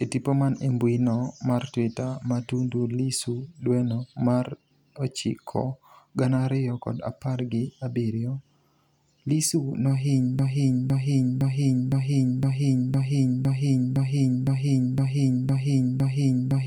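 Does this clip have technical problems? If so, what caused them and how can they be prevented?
Yes. From 10.39 s to the end, a broken-record loop repeats one 0.51 s fragment 12 times, likely from a stalled stream resending its last buffer. On a waveform or spectrogram it appears as identical blocks. Stall detection that mutes rather than repeats would prevent it.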